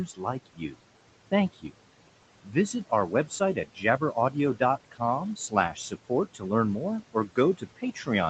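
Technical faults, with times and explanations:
Throughout: noise suppressor artifacts. The steady room noise, sitting about 16 dB under the speech, is pushed down by about 18 dB in the pauses and then lifts back up beneath each phrase. This pumping in step with the talking identifies band-by-band suppression rather than a fixed noise gate. The audio tops out near 8 kHz, as expected on this call path.
0.06–0.75 s, 1.31–1.75 s, 2.43–5.01 s, 5.36–6.43 s, 7.13 s to the end: speech cut by the noise suppressor. Soft consonants and word tails drop by about 17 to 19 dB, sounding swallowed or faint. That adds up to roughly a third of a second in the first span, a tenth in the second, under a second in the third and a third in the fourth. Unlike a dropout, the loss follows quiet speech detail, not a fixed timing.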